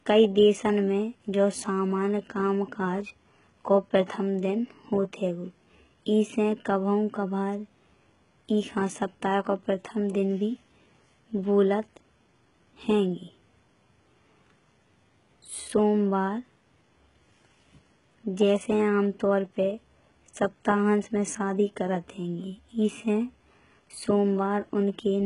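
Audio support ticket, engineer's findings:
Speech band-limited throughout, nothing above 11.1 kHz; sibilants gritty, metallic and lispy, treble extended but synthetic. Likely HE-AAC compression, heavy damage consistent with roughly 12 kbps: treble rebuilt by band replication, harmonics misaligned across the crossover.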